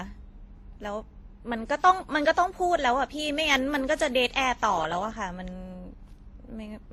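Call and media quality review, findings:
Transcoding between lossy codecs, throughout the speech. Two artefact layers heard together, capped by the lower cut-off. Likely WMA re-encoded to Opus, which fits 48 then 32 kbit/s. Opus spends bits re-coding the WMA artefacts and adds its own.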